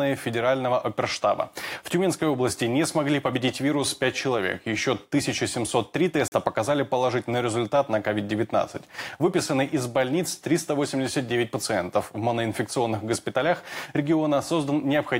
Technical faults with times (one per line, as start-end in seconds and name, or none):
6.28-6.32 block of digital silence